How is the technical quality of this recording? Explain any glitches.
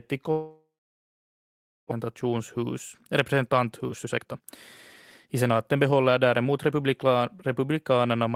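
The recording has clear transport glitches: one long gap near the start and two stretches where the speech is hurried.

From 0.31 to 1.93 s there is a long network dropout. The speech stops. A fading buzz continues the last sound briefly. Then about 1.23 s of near-silence follows. When the speech resumes, roughly a second of it is missing. The likely cause is that packets stopped arriving, so the receiver concealed the gap. Its playout delay then grew by around half a second.

Two jitter buffer speed-ups follow. From 2.01 to 4.48 s the speech runs at 116% of normal rate. From 5.26 to 6.83 s it runs at 110%. The pitch stays the same, but the talking sounds rushed. The receiver was trimming its backlog. It cut out many tiny pieces, each one or a few pitch periods long. About 400 ms was removed in the first stretch and about 150 ms in the second.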